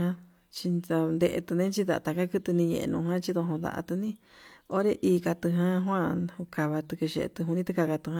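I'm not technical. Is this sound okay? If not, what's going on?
Yes, this sound is okay, and nothing is going on that needs fixing.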